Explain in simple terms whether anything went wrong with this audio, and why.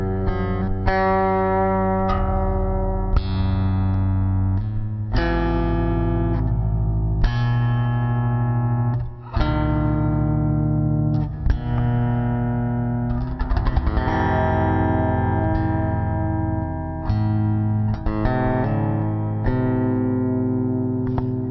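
Yes, there is a wrong sample rate fault for the whole clip. Everything plays at about a third of normal speed and roughly 17.6 semitones lower, which fits 44.1 kHz audio played at 16 kHz. Unlike simple slowing, which keeps pitch, speed and pitch drop together here.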